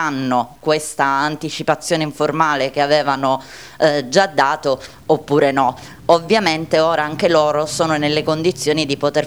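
From start to end, a grainy distortion rides on the sound and changes with it. Quiet passages turn gritty. The cause is likely low bit depth without dither, roughly 9 bits, truncated. The error sits around 40 dB below the signal.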